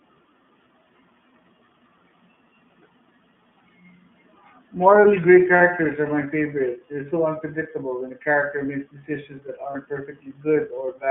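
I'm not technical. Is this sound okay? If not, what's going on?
No. The speech was squeezed through the iLBC codec, a low-data internet-phone format that keeps only phone-line frequencies, so it sounds muffled, slightly rough and a bit synthetic throughout. It also has lost iLBC frames: brief chunks of data went missing at 5.58 to 5.61 s and at 9.72 to 9.75 s, just after "decisions that". The player filled each 30 ms gap with a short held, slightly buzzy or breathy sound before the speech resumed.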